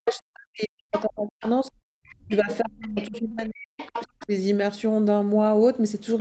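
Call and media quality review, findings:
Speech suppressed in double talk, 0.0–1.71 s and 2.25–4.33 s. The near talker dips by as much as about 40 dB, in pieces adding up to roughly one and a half seconds in each span. Likely the echo canceller's suppressor, which cannot tell near speech from loudspeaker echo during overlap and attenuates both. This is not a codec dropout or packet loss: the gaps line up with the far voice being present, and the level ducks rather than glitching.

Other side's voice leaking through: short scraps at 0.11–0.2, 0.93–1.03 and 1.43–1.51 s, a longer stretch at 2.09–3.2 s, and 3.78–4.26 s. The second voice sits about 20 dB below the talker, about 15 dB at 0.93 s and about 10 dB at 3.78 s. Likely residual echo the canceller failed to remove. It is a distinct second talker rather than a smeared copy of the near voice, which rules out reverb. Both faults sit over a call path whose band stops at 8 kHz.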